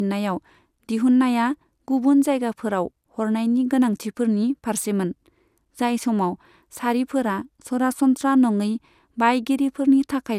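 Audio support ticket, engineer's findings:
Swirly, hollow, smeared speech throughout, consonant attacks softened, nothing above 16.7 kHz. Likely generation loss: a few repeated lossy encode/decode passes, consistent with an MP2 chain at 128 kbit/s. Each pass requantises on a shifted frame grid, so noise and spectral holes accumulate beyond what one encode at that rate would leave.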